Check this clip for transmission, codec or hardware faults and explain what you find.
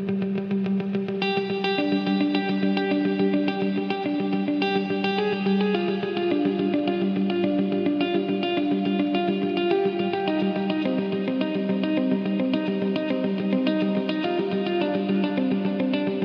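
No transmission, codec or hardware faults.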